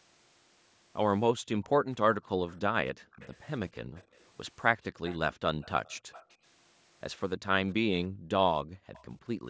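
Faint, delayed copies of the speech surface at 1.62 and 2.48 s, arriving about 280 ms late and roughly 30 dB down. This is likely an echo leak, where a far-end loudspeaker's sound slipped past its canceller. Unlike reverb, it is a distinct repeat, not a smeared tail. At 2.96 s the background gated by the echo canceller dips about 40 dB for roughly 150 ms, then returns. More echo follows at 3.11, 3.96, 5.05 to 6.34 and 8.93 s, now about 310 ms behind and between about 20 and 30 dB below the speech. A second gating dip runs from 8.09 to 8.93 s.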